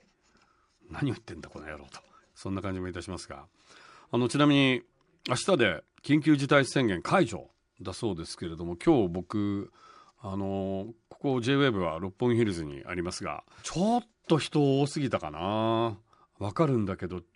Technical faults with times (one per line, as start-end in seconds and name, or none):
none